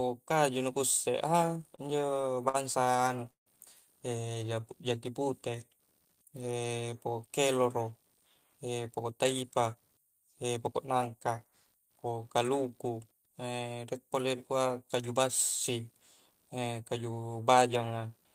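Under the whole clip there's faint computer activity noise, a buzzy pulsing around 70 Hz roughly 45 dB below the speech, from processor or graphics load disturbing the audio ground.

From 1.75 to 3.48 s there's repeated stutter: the jitter buffer kept running dry, so the receiver stretched the last sound through about a dozen stalls. The longest lasts 157 ms, and the speech drags.

From 4.39 to 6.69 s a jitter buffer slow-down plays the speech at 88% speed with unchanged pitch. Repeated pitch periods add 282 ms to rebuild the reserve.

From 8.50 to 11.83 s a jitter buffer speed-up does the reverse, trimming around 0.3 s of pitch periods to shed excess delay. The speech runs at 110% and sounds hurried.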